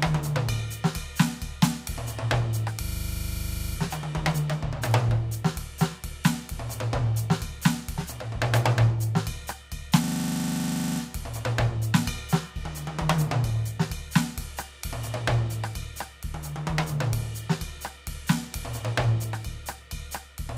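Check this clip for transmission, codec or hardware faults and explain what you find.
The music has two system hang loops. From 2.84 to 3.76 s and 10.04 to 11.0 s, a frozen system let the hardware replay one 40 ms buffer, giving a rigid 25 Hz stutter.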